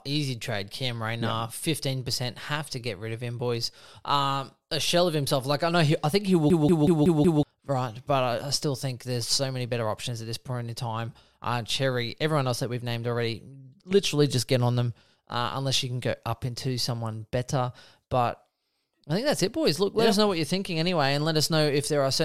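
At 6.50 s, just after "I think he will", the speech locks into a system hang loop until 7.43 s. The computer or audio driver stalled, but the sound hardware kept replaying its ring buffer. One slice of about 186 ms repeats exactly, five times, at about 5.4 per second. That length fits an 8192-sample buffer. It sounds like a rapid machine-gun stutter. When playback resumes, about a second of speech is missing.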